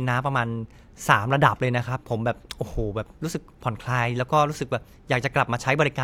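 No technical faults can be heard anywhere in this recording.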